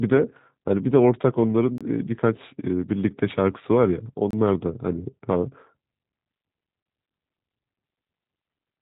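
Throughout, the speech sounds slightly rough and synthetic, with nothing above 3.8 kHz. This is G.729 codec damage: each 10 ms frame is rebuilt from a vocal tract filter, a pitch predictor and a few pulses, which fits an 8 kbit/s low-rate voice codec.

Hard-edged holes of about 25 ms cut into the sound at 1.78 s, 4.31 s and 6.83 s. These are gaps between chunks: the audio arrived in 2.5 s pieces, and silence was inserted at each join, so nothing is lost but the flow breaks regularly.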